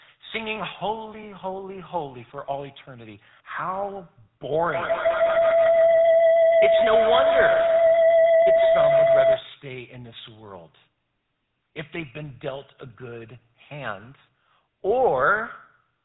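The whole clip carries the sound of the GSM full-rate codec. The speech is buzzy and gravelly. The codec rebuilds the voice from a vocal-tract model and a sparse pulse train. Nothing above 4 kHz survives, so the top end is dull.

At 0.88 s there is a burst of GSM bit errors, lasting about 40 ms to 0.92 s. Corrupted filter, pitch or gain values reach the decoder. The result is a short squawk and pop. Its length fits a couple of damaged frames.

From 4.74 s to 9.52 s there is a feedback howl. Two devices in one room are on the call, and each trip around the loop adds gain. The repeats narrow to a tone near 700 Hz. The loop repeats roughly every 150 ms, and the tone peaks about 6 dB above the speech.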